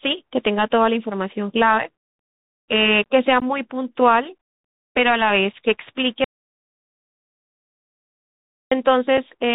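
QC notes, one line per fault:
throughout: Bluetooth CVSD headset codec. The sound is hard-limited below 4 kHz, sibilants come out scratchy, a fine granular hiss sits under the speech, and louder bright passages distort where the one-bit delta modulator's adaptive step can't keep up with the waveform. That combination of narrow band, grain and slope-overload roughness points to a 64 kbps CVSD headset link rather than a generic low-bitrate or resampling loss.
3.40–3.43, 5.53, 9.17: unconcealed Bluetooth headset packet loss. Each is a sharp-edged hole with nothing patched in. The first is about 15 ms, which fits a handful of lost headset packets. The other two are about 4 ms each, which suggests a single packet apiece. The abrupt edges can click, and the speech returns briefly subdued as the CVSD step size rebuilds. These holes are milliseconds long and sit inside ongoing speech, unlike a true dropout.
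6.24–8.72: audio dropout to silence. For about 2.47 s the signal drops to silence, with no room tone or hiss, and the speech cuts off and resumes mid-flow. Everything in that span is lost. The gap is far longer than any packet hole and completely dead rather than merely quiet, which makes the likely cause a lost input, such as a disconnected headset or a failed link, with the recorder still writing silence.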